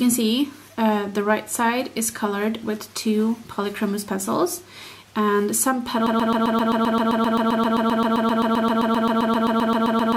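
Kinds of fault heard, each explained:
Broken-record loop: the player or stream likely stalled and kept resending its last 131 ms fragment, which repeats 31 times back to back from 6.07 s to the end, replacing the audio that should have played.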